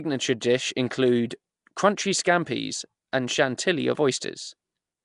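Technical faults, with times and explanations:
Throughout, Nellymoser compression: the speech has a gritty, noise-filled fringe and a blurred, submerged character, with nothing above 10.6 kHz. The cause is likely the Nellymoser Asao codec: weak bands starved of bits get filled with noise, and the damage fits about 44 kbps.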